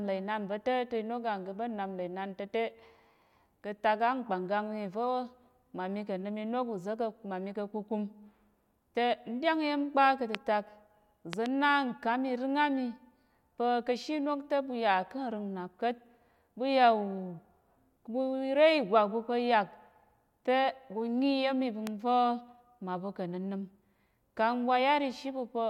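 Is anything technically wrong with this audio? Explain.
Yes, the speech is marred by loud pops. A brief voltage spike, likely from a plug, switch or static discharge, enters the signal path. It adds a sharp pop about 20 dB above the speech at 10.35 s, just after "ɗyáng iya̱m kpa ka̱", then a double pop from 11.33 to 11.48 s and another at 21.87 s after "tə ɓu nyi iya̱m", each roughly 15 dB louder, while the speech continues underneath.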